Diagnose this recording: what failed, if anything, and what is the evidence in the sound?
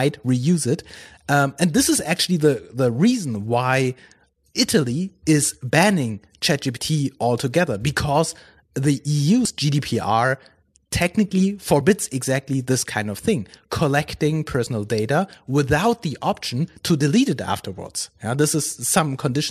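The failure is damaged data in a compressed stream, at the codec stage. Three short glitches break into the speech. The first is at 9.45 s, right after "altogether because the". The second is at 11.80 s, just before "exactly this kind of". The third is at 14.65 s, between "kind of thing collecting" and "data without the option". Each lasts under 20 ms. Corrupted bytes made the decoder misread those frames and lose sync until it found a valid header again.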